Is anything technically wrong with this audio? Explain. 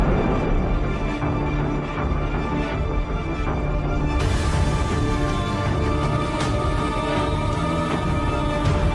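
No, nothing technically wrong can be heard in this audio. There is no fault here to explain.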